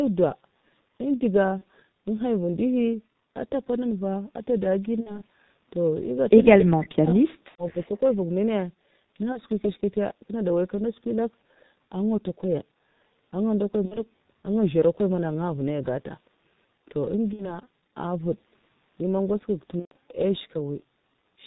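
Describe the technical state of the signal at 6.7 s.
At 6.7 s the speech is dipping and breaking up, falling by as much as about 40 dB in pieces that add up to roughly a second between 6.55 and 7.95 s. The likely cause is speech suppressed in double talk: with both sides active, the echo canceller couldn't tell this talker from returning echo and turned everything down.

Underneath, the speech is muffled and hoarse, with smeared consonants and nothing above 4 kHz, from heavy G.723.1 codec coding at 6.3 kbit/s. Its 30 ms frames and slowly updated voice model can't follow fast changes, so detail is lost.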